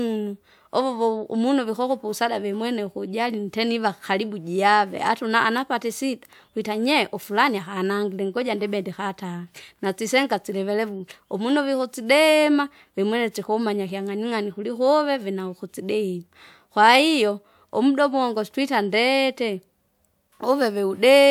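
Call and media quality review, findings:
No faults found in the speech clip. Nothing audible calls for a component investigation or ticket action.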